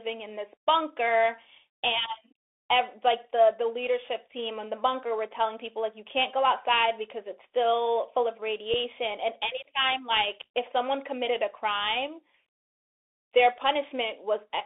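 From start to finish the speech has passed through a Bluetooth CVSD headset codec, which fits a 64 kbps link encoding one bit per sample, each bit only nudging the level up or down by an adaptive step. The line passes roughly 300 Hz to 3.6 kHz, so the sound is thin and boxy with no top end. Loud, bright moments outrun the step size and distort, s sounds turn scratchy, and a fine granular hiss sits beneath the speech.

At 8.74 s the link suffers unconcealed Bluetooth headset packet loss. About 3.8 ms of audio, around a single packet, never arrived between headset and phone, and nothing was done to hide the gap, so silence or an idle pattern filled it. The speech drops out in a tiny, hard-edged hole, and because the CVSD decoder must rebuild its step size afterward, the speech returns quieter for a moment before recovering.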